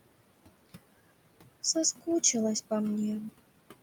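From start to finish, the background noise drops away in the gaps between words and comes back up underneath each phrase, so the noise floor seems to pump in step with the speech. These are noise suppressor artifacts. The suppressor judges, frame by frame, which frequency bands hold steady noise and pulls them down, here by about 21 dB. The room noise, roughly 13 dB below the speech, is what it is acting on.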